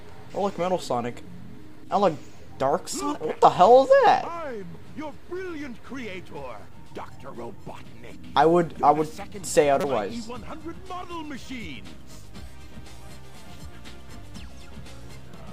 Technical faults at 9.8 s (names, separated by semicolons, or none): damaged data in a compressed stream